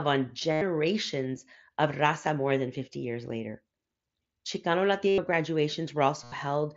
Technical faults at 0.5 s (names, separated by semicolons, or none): concealed Bluetooth headset packet loss